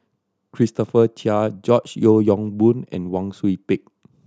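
Speech recording with no audible technical faults found anywhere in the clip.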